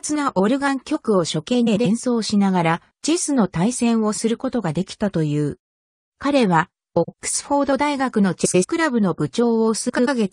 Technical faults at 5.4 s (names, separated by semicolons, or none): none